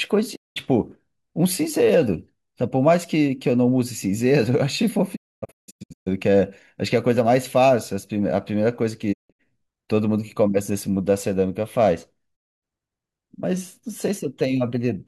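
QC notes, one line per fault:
0.35–0.58 s, 5.15–6.08 s, 9.12–9.41 s, 12.35–12.64 s: digital broadcast dropout. The receiver lost frames and muted, with 20 ms fades into silence, in holes that fit 32 ms frames. At 5.15 s and 9.12 s the holes scatter. The waveform shows flat gaps, and the spectrogram shows blank vertical bands.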